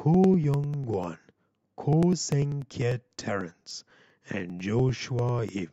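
From about 0.14 s through to 5.59 s there's a steady run of periodic USB or driver dropouts, roughly every 0.1 s, so around fifty ticks in all. Something keeps stalling the audio path at a fixed rate, and each time about a millisecond of the speech just gets skipped rather than padded with silence. You hear it as a regular, clock-like ticking riding on the voice, only where there's actually signal.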